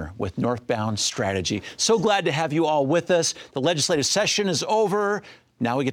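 Nothing is technically wrong with the clip.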